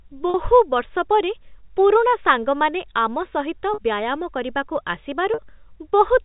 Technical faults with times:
0.30-0.34 packet loss with pitch repetition
3.74-3.78 packet loss with pitch repetition
5.34-5.38 packet loss with pitch repetition

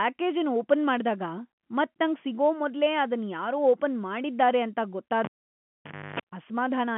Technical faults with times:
5.24-6.20 cable pulled and plugged in

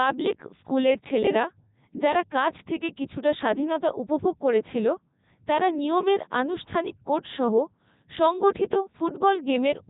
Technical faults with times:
0.00-9.90 Codec 2 vocoder

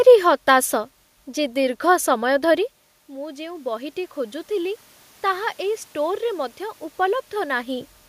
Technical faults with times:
3.06-7.95 automatic gain rising

